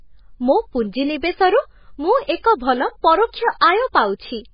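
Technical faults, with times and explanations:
Throughout: MP3 compression, likely. The band stops dead near 5 kHz, and the remaining detail swirls and warbles as weak frequency lines drop in and out between frames. The heavy damage fits a very low bitrate of around 16 kbps, which starves the encoder of bits.
2.24 to 2.28 s: pre-echo. A short hiss runs for about 41 ms ahead of a sharp onset, and the attack itself sounds blurred. The codec spread the noise budget for the loud transient across its whole block, including the quiet lead-in.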